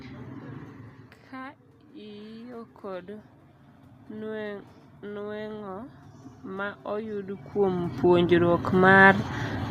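A speech clip with automatic gain rising twice, from 1.31 to 3.36 s by about 3 dB and from 4.1 to 9.16 s by about 10 dB, after the input dropped about 12 dB. Room noise swells with the voice, unlike the talker's movements near 0.5 and 7.5 s.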